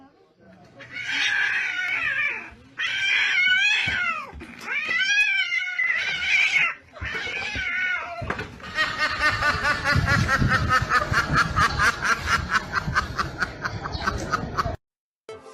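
At 0.89, 1.88, 2.87, 4.85, 5.84, 6.83, 7.82 and 13.81 s you get tiny skips from overlap between stream segments. The 1-second segments' timestamps collide, so a few milliseconds get trimmed from real audio and the waveform jumps, giving those brief skips.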